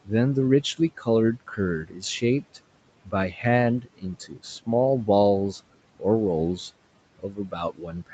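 Between 1.4 and 2.58 s, 3.05 and 3.38 s, 3.81 and 4.68 s, and from 7.19 s to the end, you get speech cut by the noise suppressor: it treats bits of speech as background and ducks them by about 12 to 18 dB, so endings and soft sounds come out swallowed.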